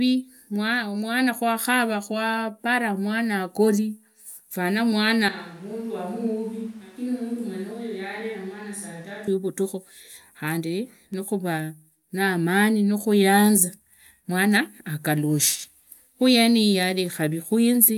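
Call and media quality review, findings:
Switch to a distant microphone, 5.29–9.27 s, after "hagori fana": abrupt hollow roominess, about 10 dB quieter, likely close-mic loss. Waveform steps down; spectrogram shows thinned lows, raised noise floor.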